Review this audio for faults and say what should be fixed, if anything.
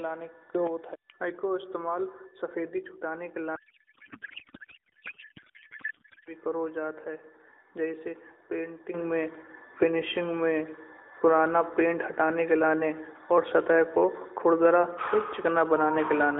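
Two sudden gain jumps are audible. At 0.55 s the level leaps up by about 9 dB and drops back at 0.67 s. At 8.94 s it rises by about 10 dB and stays up to the end. The speech and the background noise jump together, so the likely cause is a digital gain change applied from one sample to the next with no ramp. On the waveform the envelope steps abruptly, and on a spectrogram the whole column brightens at once. Prevention: apply every gain change through a short ramp of a few milliseconds.

From 3.56 s to 6.33 s, between "इस्तेमाल सफेदी छुड़ाने के" and "करो जात है जैसे", the speech gives way to garbled noise and warble that barely follows it. This is a codec payload misread. The decoder is pulling fields from the wrong bit positions, which fits octet-aligned AMR being read as bandwidth-efficient. On a spectrogram the harmonic striations turn into smeared, disordered energy that still sits below 4 kHz, as the narrowband AMR channel does elsewhere. 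Prevention: make both ends negotiate the same AMR payload format in signalling.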